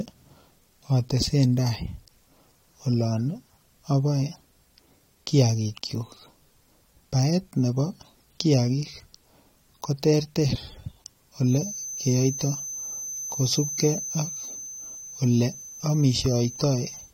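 From 11.39 s to the end there's a feedback whistle at 6.2 kHz, about 15 dB under the speech, likely a loudspeaker-to-mic loop hovering at feedback.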